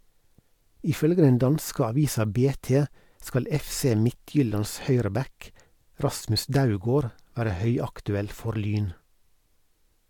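Listening through this recording of speech, nothing stood out as a technical fault at any point.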